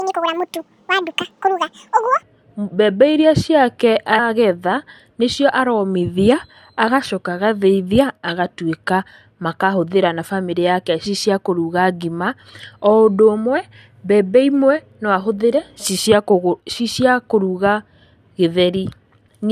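The speech opens high and hurried, its pitch raised by roughly ten semitones and its pace nearly doubled at 1.94 times normal from 0 to 2.23 s, until normal speed returns just before "mbembe iria". This section at the wrong speed likely comes from the audio being played or edited against the wrong clock, so speed and pitch rise together. Brief glitches sound at 4.18 s, at 11.05 s right after "makahũthĩra na bamĩrĩ yake", and at 19.27 s. These come from damaged data in the compressed stream: the decoder misreads the corrupted frames, loses sync and searches for the next frame header.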